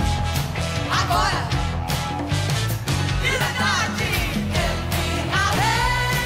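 At 3.41 s and again at 5.55 s there's a tiny blip, each only a few milliseconds long, and both come from damaged data in the compressed stream. A stretch of the encoded bytes is wrong there, so the decoder can't make sense of that frame, loses its footing and has to hunt for the next valid frame header before it can carry on. What you get is a short glitch where clean decoded audio should be.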